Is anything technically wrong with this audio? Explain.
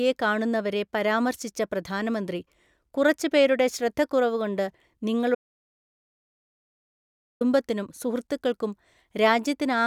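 Yes. From 5.35 s to 7.41 s there is an audio dropout to silence lasting about 2.06 s. The speech stops abruptly, and the gap is silent, with no room tone or background hiss, before the speech resumes just as abruptly. The likely cause is that the input signal was lost, through a disconnected device, a broken link or an unintended mute, while recording continued and wrote empty samples. Whatever was spoken during those two seconds is not recoverable.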